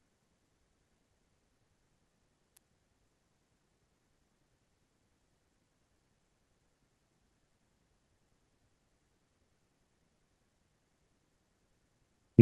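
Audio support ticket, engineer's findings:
Single sharp snap at 2.57 s, a brief click sitting on top of the speech and peaking at about -25 dBFS. Likely an electrical switching spike: a nearby switch or motor arcing, the line picking up the burst.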